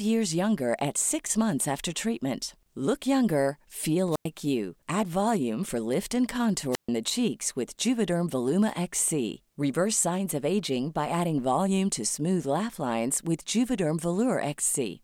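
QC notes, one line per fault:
4.11–4.25 s and 6.71–6.89 s, wireless microphone squelch dropout: hiss swells, then speech vanishes for about 98 ms and 136 ms as the fading radio signal trips the receiver's squelch.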